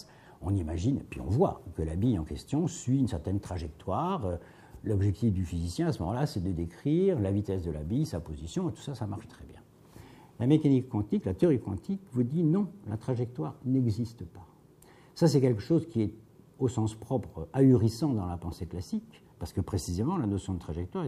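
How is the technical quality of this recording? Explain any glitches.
No glitches or technical faults are audible anywhere in the recording.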